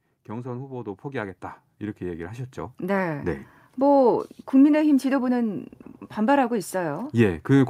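From 0.29 to 1.46 s the automatic gain control decides the input's too quiet and ramps up by about 6 dB, then does it again from 1.98 to 4.09 s, about 8 dB. Both times speech and room noise swell together, gradually.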